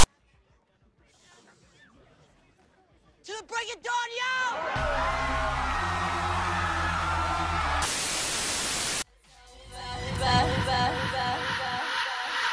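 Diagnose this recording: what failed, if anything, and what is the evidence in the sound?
Storage-side glitch: file tags played as audio at 0 to 0.04 s. A block of text tag bytes is decoded as samples, giving a harsh, lopsided rasp with hard edges.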